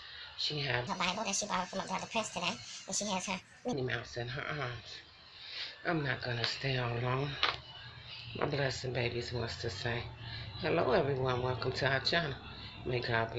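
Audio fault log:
0.87–3.73 s, wrong sample rate: this stretch runs 1.5 times too fast and sits about 7 semitones higher, so it sounds squeaky and rushed. Speed and pitch shift together, which fits 16 kHz audio being played back at 24 kHz without any conversion.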